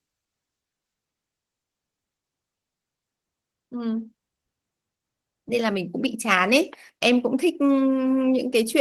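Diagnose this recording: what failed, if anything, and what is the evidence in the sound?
Nothing failed: the speech shows only the light coarsening expected of Opus voice compression in hybrid mode with the full band kept, consistent with a bitrate around 20 kbps, and no stage from capture to playback leaves any other mark on the sound.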